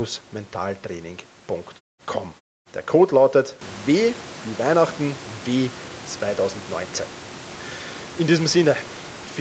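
No technical faults are audible.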